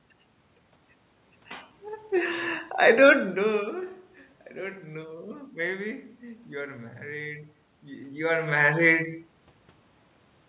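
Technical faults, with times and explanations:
No technical faults are heard, so there are no times or explanations to give.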